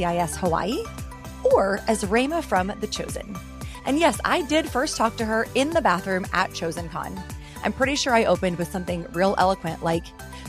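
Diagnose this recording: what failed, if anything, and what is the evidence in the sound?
Nothing failed in this recording, and the sound gives no evidence of a fault at any stage.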